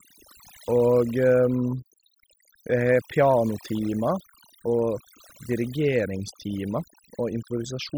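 Overdone noise removal runs through the whole clip: a noise reducer set too hard pushes individual frequency bands down or out wherever they sit near its noise estimate, taking quiet parts of the speech along, so the background drops and breaks up into twinkling specks.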